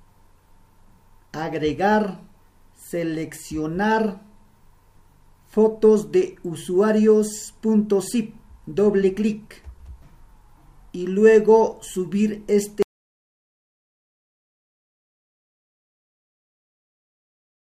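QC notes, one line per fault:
12.83 s to end: audio dropout to silence. The sound stops abruptly at 12.83 s and the last 4.9 s of the clip are silence, with no room tone or noise floor underneath. That silence points to the input signal vanishing while recording or encoding carried on writing silence, most likely from a disconnected source, a broken link or an unintended mute. Nothing from that stretch survives.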